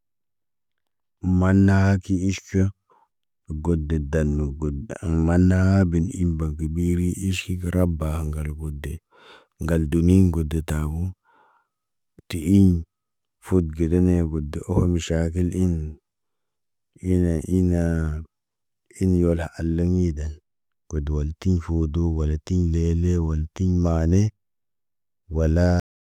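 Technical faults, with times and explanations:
25.80–26.11 s, cut-off end: the speech just stops dead at 25.80 s, mid-sound, and the last third of a second is flat digital silence. Nothing decays away naturally, so it sounds like the final buffers never got written or played out.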